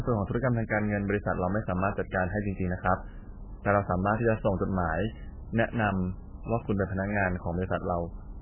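MP3 compression, throughout the clip: the speech has nothing above 3 kHz and heavy codec damage, likely from an MP3 encoder starved at a very low bitrate. With so few bits, it cut the treble at a fixed point and dropped weak frequency lines, leaving a dull, watery, swirling sound.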